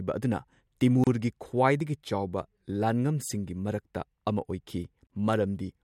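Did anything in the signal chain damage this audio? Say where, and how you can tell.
Yes, a gap at a join of encoded pieces, at the codec stage. Speech cuts to silence at 1.04–1.07 s (30 ms) and 5.07–5.10 s (32 ms), four seconds apart, with smeared edges. Separately encoded segments were joined untrimmed, keeping each run's start delay and final-frame padding.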